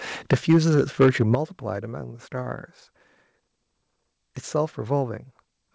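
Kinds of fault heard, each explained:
Microphone overload: From 0.32 to 1.35 s the loudest speech peaks are flattened at the converter's limit and carry a harsh, crackling edge. Their tops are sheared off, suggesting the signal was driven roughly 9 dB past the converter's ceiling, with a small but audible share of samples clipped. The likely cause is a microphone input gain set too high, so the preamp and converter ran out of headroom on strong syllables.
Microphone volume stepped down: The speech and the background drop together in sudden steps rather than fading, by about 4 dB at 0.34 s and by about 10 dB at 1.35 s, where the distortion stops. The timing points to an automatic gain control that likely reacted to the clipped peaks by cutting the device's input volume in discrete jumps, first modestly and then more heavily.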